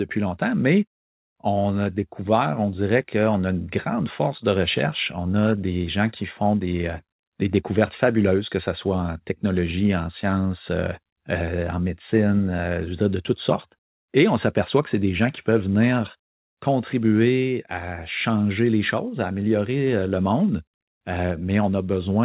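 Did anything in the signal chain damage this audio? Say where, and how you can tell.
No, nothing in the chain has damaged this speech. The call path is audible only as the usual narrowband telephone sound, with nothing above 4 kHz, which fits a G.711 mu-law codec at 64 kbps, and the microphone processing's high-pass filter only takes out the lowest bass, which is normal.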